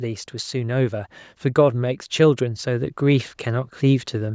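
From 0.5 s to 4.3 s the level climbs steadily by about 6 dB, a case of automatic gain rising. The gain control judged the input too quiet and kept turning it up. Speech and background noise swell together, so the room seems to creep closer. On a waveform the envelope widens gradually across those seconds. On a spectrogram the whole image brightens evenly, including the noise floor between phrases, which stays capped near 8 kHz by the call microphone path.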